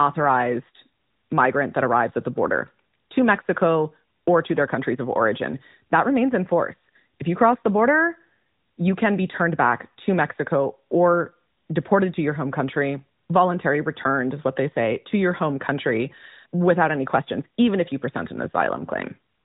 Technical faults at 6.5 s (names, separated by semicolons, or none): none